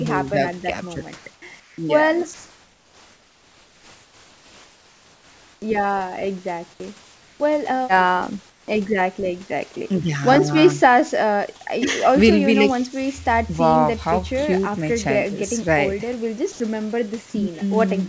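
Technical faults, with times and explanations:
1.16–1.78 s, 2.34–5.62 s, 7.04–7.40 s, 8.50–8.68 s: comfort noise in place of the background. In the pauses the room tone becomes a smooth, featureless hiss, about 3 to 6 dB quieter, likely because discontinuous transmission stopped sending and the receiver synthesised noise.
5.60 s: onset clipped by the voice detector. The sound resumes abruptly, with about 20 ms of its soft beginning missing and covered by synthetic noise, as the detector likely reacted late after the long pause.
9.74 s and 16.52–16.60 s: sound dropped by the voice detector. Brief pieces of sound, about 10 ms and 40 ms, are replaced by comfort noise, likely because the detector mistook them for background and briefly stopped sending. Everything above 8 kHz is absent, consistent with the G.722 call path at 64 kbps.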